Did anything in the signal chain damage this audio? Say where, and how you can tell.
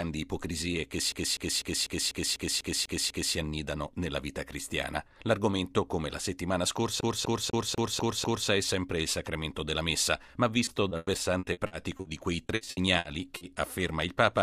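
Yes, two spots. The first is at playback: from 1.12 to 3.35 s you get a CD stuck on one turn, the same slice of about 0.25 s (247.76 ms) looping nine times with a little mute at each jump, and it happens again from 7.01 to 8.49 s with six repeats of the same length. That fast, even stutter is the laser getting kicked back a track at a damaged spot on each rotation.

The second is on the network side: repeated packet loss with that robotic, choppy quality. From 10.65 to 12.07 s there are eight gaps, the longest 100 ms, with about 23% of that stretch patched over. Then from 12.47 to 13.43 s there are six more, up to 60 ms, about 27% concealed. Each hole gets filled by stretching the last bit of sound, so it comes out broken up.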